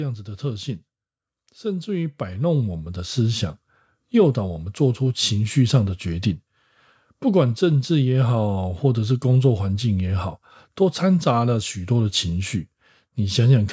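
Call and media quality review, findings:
Automatic gain rising, 1.61–3.57 s: speech and background swell together, about 8 dB up over roughly two seconds. AGC on the call path judged input too quiet and ramped gain slowly. Call mic processing passes through normally, with nothing above 8 kHz.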